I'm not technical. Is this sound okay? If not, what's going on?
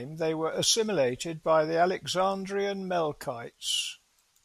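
No. Just after "they were", from 0.53 to 0.64 s, there's a sudden gain jump. The speech and background noise abruptly get louder together, likely from a volume change applied instantly.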